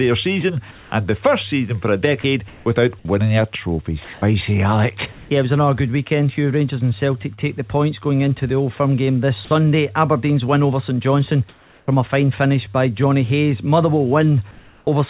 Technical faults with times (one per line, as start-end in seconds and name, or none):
0.71-5.30 sound chopped by the voice detector
7.34-7.41 short concealed packet loss
11.49-12.77 sound chopped by the voice detector
14.51-14.87 comfort noise in place of the background